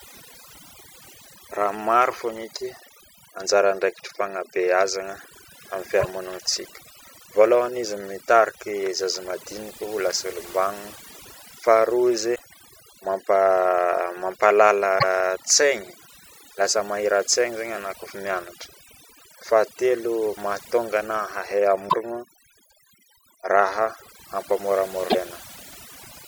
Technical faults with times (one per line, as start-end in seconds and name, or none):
0.00-26.27 overdone noise removal
6.00-6.05 broken MP3 bit reservoir
12.34-12.40 broken MP3 bit reservoir
14.98-15.04 broken MP3 bit reservoir
21.88-21.94 broken MP3 bit reservoir
25.09-25.15 broken MP3 bit reservoir